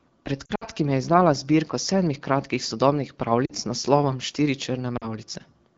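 At 0.45 to 0.65 s the speech suffers lost AMR speech frames: about 100 ms is missing, scattered over 160 ms, with the longest run 60 ms. The decoder repeats its last good pitch and vocal-tract settings at falling gain, so the sound drops to near silence within two frames. Shorter 40 ms dips follow at 3.45 to 3.52 s and 4.97 to 5.06 s. On a spectrogram these show as frozen, fading harmonic bands, and the waveform envelope dips before recovering.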